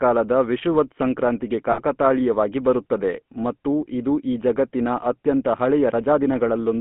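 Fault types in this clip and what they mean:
GSM full-rate codec: The audio was coded by a vocal-tract model driven by sparse, regularly spaced pulses, which fits the 13 kbps GSM full-rate coder. This leaves a plainly audible buzzy, gravelly roughness, and the band runs only from 150 Hz to 3.5 kHz.
lost GSM frames: About 60 ms of coded speech went missing, consistent with three frames. The decoder filled the gap by repeating the last good frame's settings, so from 1.72 to 1.96 s the sound hangs as a rough, metallic ring.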